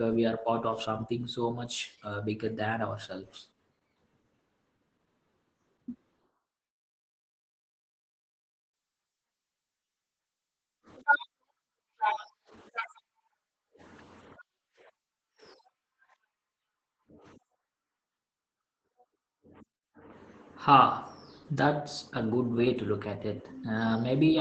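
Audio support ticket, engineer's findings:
Speech muffled, hoarse and slightly robotic throughout, plainly audible; no content above 15.4 kHz. Probable component: Opus voice compression, SILK linear-prediction mode, coarsely coded excitation. Artefact character fits a low bitrate near 12 kbps with 20 ms frames.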